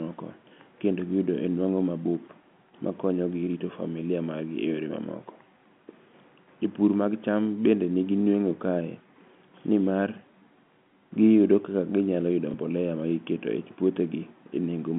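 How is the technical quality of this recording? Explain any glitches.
One brief glitch stands out, over a narrow telephone band of roughly 150 Hz to 3.5 kHz from G.711 coding.

From 12.51 to 12.54 s there is packet loss with the last packet repeated. About 30 ms went missing, which fits one dropped packet, and the receiver replayed the previous chunk. This gives a small blip. A waveform shows a copied segment.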